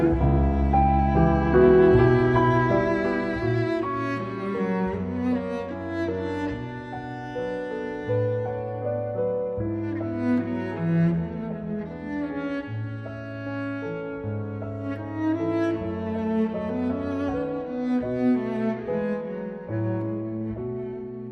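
From 2.59 to 3.82 s there is zipper noise. The level falls by roughly 15 dB over that span. The fall is not smooth. It moves in small discrete jumps, around a hundred of them each second, with no smoothing between them. Each jump puts a tiny click in the waveform. Together the clicks form a fast ticking, zipping texture that rides on the sound while the level drops.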